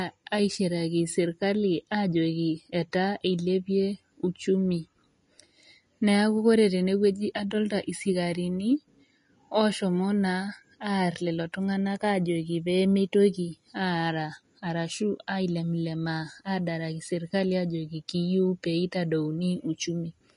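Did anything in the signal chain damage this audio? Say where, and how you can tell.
Yes: Vorbis compression throughout, codec stage. Nothing above 10.6 kHz; hissy, grainy treble where coarse quantisation turned detail to noise, likely from about 32 kbps.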